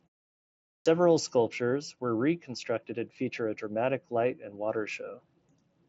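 The output device went idle during the opening 0.71 s of silence and needed time to wake, so a clipped start after a pause swallows 146 ms, from 0.71 to 0.86 s. The speech then begins abruptly, missing its first sounds.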